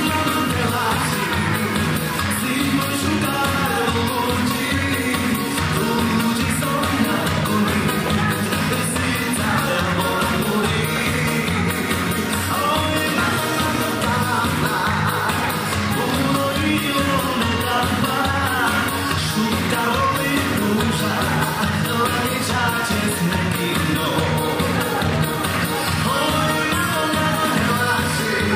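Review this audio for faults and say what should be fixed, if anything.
No faults; nothing to fix.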